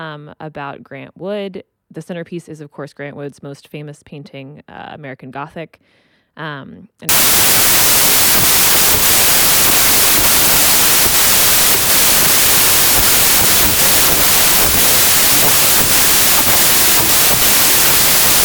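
From 7.09 s to the end, just before "the story", the clip suffers a wrong sample width fault: the audio points to packed 24-bit data being read as 16-bit samples. Many values are stitched from mismatched bytes, so a loud hiss swamps the speech, which survives only faintly, at two-thirds speed and lowered pitch. A spectrogram shows broadband noise filling every frequency band, and the waveform jumps to a dense block.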